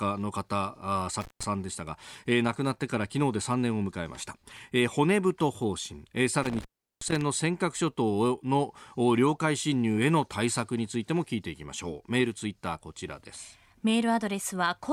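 At 1.21 s and again at 6.43 s, the speech drops out through intermittent contact, a loose connection briefly opening the line for about 156 ms and 369 ms. Each gap has crackle at its edges, visible as broadband vertical streaks around a near-flat waveform holding faint hiss.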